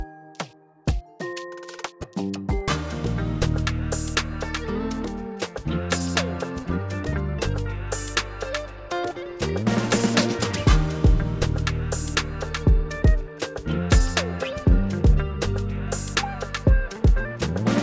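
No technical faults can be heard anywhere here.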